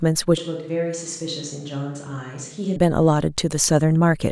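A speech recording that abruptly turns roomy and hollow from 0.38 s to 2.76 s. The bass thins, the level falls by about 10 dB, and room noise rises to around 35 dB below the speech. The cause is likely a switch to a distant microphone. Unlike added reverb or a simple EQ change, the change is instant at both edges and brings level loss and background noise along with the room sound.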